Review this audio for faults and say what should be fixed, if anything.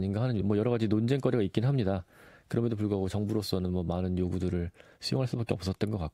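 Nothing stood out on listening, so there is nothing here that needs fixing.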